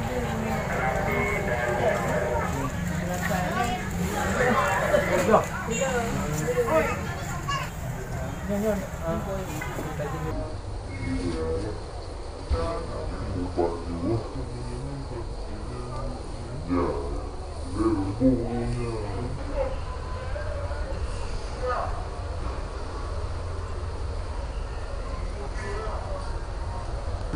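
From 10.31 s to the end, a section at the wrong speed plays at 0.624x, likely from a clock mismatch, dropping pitch about seven semitones and dragging everything.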